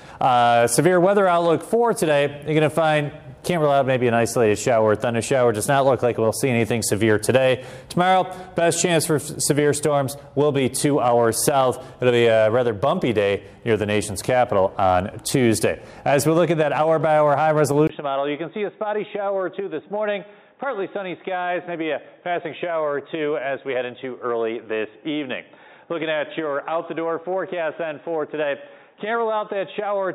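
At 17.87 s the sound drops out for 20 ms. After it, nothing above 3.8 kHz remains. The tone turns dull and boxy, a few decibels quieter, over a faint new noise floor. This lasts to the end. The input likely switched to a poorer device.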